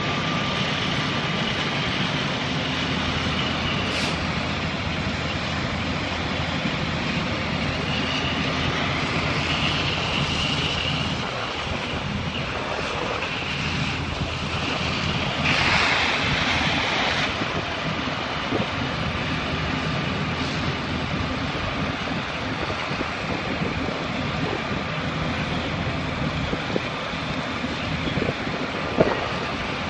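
Nothing technical stands out in this audio, so there's no problem here to point to.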